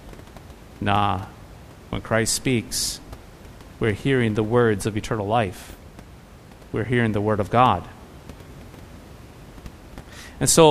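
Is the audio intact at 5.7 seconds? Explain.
Yes, the speech is intact at 5.7 seconds, with only the room's own background noise audible, about 22 dB below the speech.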